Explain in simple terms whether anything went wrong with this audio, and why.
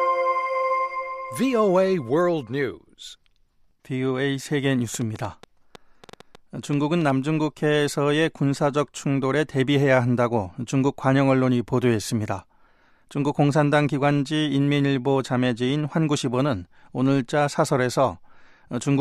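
Something, most likely interference from nearby equipment or a faulty connection or power supply, kept injecting pulses: a train of clicks from 4.94 to 7.11 s, about fifteen uneven pops, roughly six per second.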